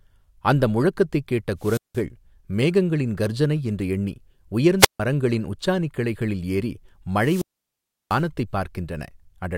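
Three wireless microphone squelch dropouts occur, at 1.59–2.03 s, 4.79–5.00 s and 7.17–8.25 s. Each time the radio link fades, hiss rises briefly, then the receiver's squelch mutes the speech for about 175 ms, 151 ms and 695 ms respectively before it returns.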